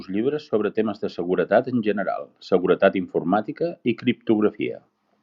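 Nothing in the speech here stands out as a technical fault; there's no moment where anything slips or goes wrong.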